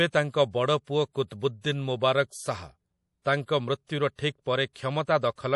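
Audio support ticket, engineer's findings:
MP3 compression across the whole speech clip, plainly audible: watery, swirly texture, nothing above about 11.5 kHz. Likely a low-bitrate MP3 encode, which fits roughly 48 kbps, with the encoder cutting treble and dropping weak bands frame to frame.

Pre-echo at 4.15 to 4.19 s: short hiss leading a sharp attack by about 33 ms, attack sounds softened. Codec block spreading quantisation noise from the loud onset back into the quiet moment just before it.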